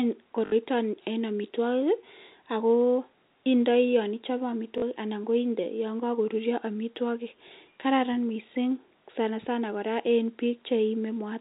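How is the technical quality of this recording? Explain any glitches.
Three short glitches interrupt the speech, which comes through a band-limited telephone-style path. At 0.46 to 0.52 s, 4.78 to 4.82 s and 7.48 to 7.50 s there's packet loss with last packet repeated: lost chunks, consistent with 20 ms packets, get replayed, so the first two gaps stutter robotically and the last gives a small blip.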